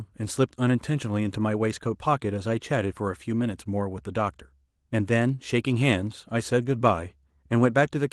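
No faults can be heard anywhere in this recording.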